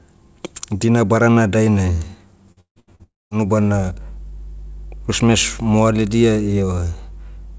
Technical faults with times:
2.52-3.02 repeated packet loss (robotic sound)
3.03-3.34 long network dropout

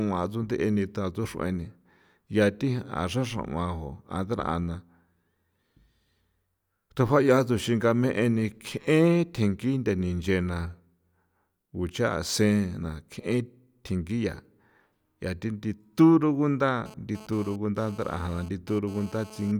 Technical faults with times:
16.86-19.52 GSM phone buzz

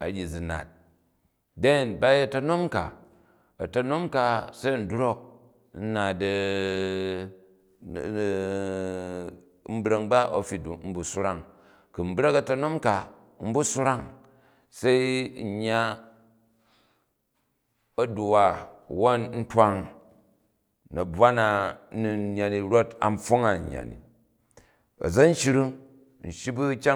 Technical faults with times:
none

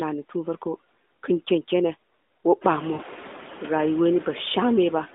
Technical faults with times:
0.00-5.14 noise suppressor artifacts
2.94-3.02 lost AMR speech frames

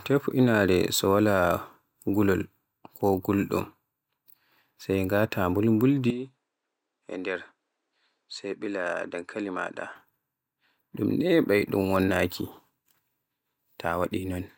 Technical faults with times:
6.10-9.96 input switched to a poorer device

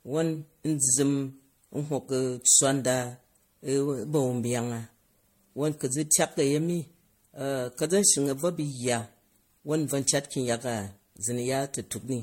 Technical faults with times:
0.00-12.22 generation loss

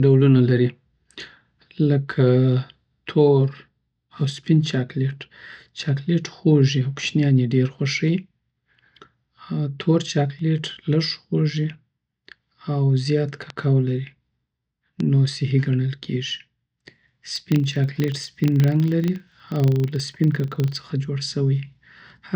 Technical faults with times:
10.39 bit error spike
13.50 bit error spike
15.00 bit error spike
17.36-20.95 filter restarted on every block

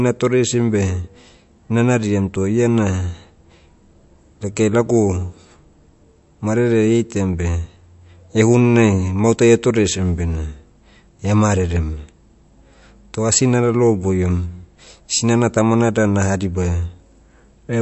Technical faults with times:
0.00-17.81 MP3 compression

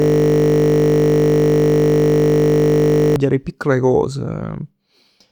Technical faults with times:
0.00-3.16 system hang loop

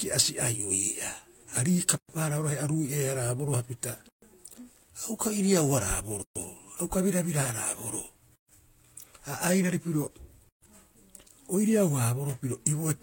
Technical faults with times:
1.98-2.09 gap at a join of encoded pieces
4.09-4.22 gap at a join of encoded pieces
6.22-6.36 gap at a join of encoded pieces
8.36-8.49 gap at a join of encoded pieces
10.49-10.62 gap at a join of encoded pieces

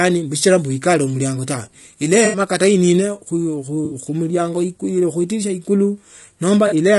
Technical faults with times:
0.00-6.99 low-delay AAC compression
2.25-2.39 AAC frame loss with concealment
3.85-3.95 AAC frame loss with concealment
6.67-6.73 AAC frame loss with concealment

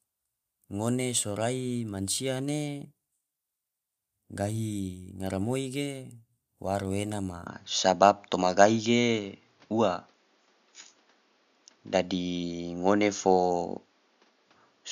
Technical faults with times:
7.47-14.91 input switched to a poorer device

